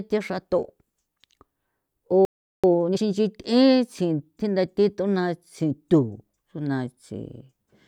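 A speech recording in which the talker cuts out abruptly at 2.25 s and the line goes completely dead for about 0.39 s, until 2.64 s. This is a playback stall: the silence lands mid-flow rather than at a natural pause, and the cause is likely the player running dry of buffered data or its output thread being held up, so nothing reached the output until it recovered. When sound returns at 2.64 s, the next stretch up to 3.02 s is rushed through at roughly twice normal speed while the pitch stays where it was. That is time-compressed catch-up: to recover the backlog built up during the gap, the player trims out short slices of audio and cross-fades the remaining pieces together, which squeezes the timing without shifting pitch.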